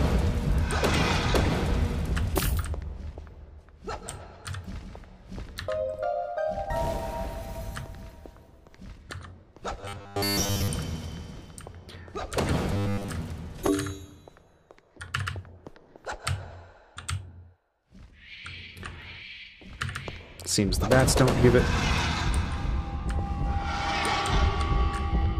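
Robotic sound from repeated short buffers hits the audio at 9.81–10.68 s and 12.74–13.09 s. A rigid 100 Hz buzz replaces most of the sound, likely from a 10 ms buffer looping, and unlike a dropout there's no silence.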